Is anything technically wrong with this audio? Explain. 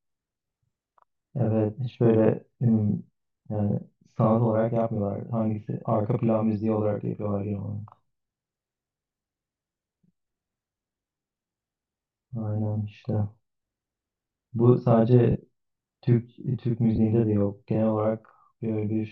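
Yes, there are two faults. A channel delay (doubling) runs throughout. One channel arrives 40 ms late, and the mono sum makes the speech sound doubled, like a slap echo.

Lost LE Audio frames occur at 15.31 to 15.35 s, about 40 ms, and at 16.96 to 16.98 s, about 20 ms. The decoder repeats the last spectrum with scrambled phase, so the speech briefly smears into noise.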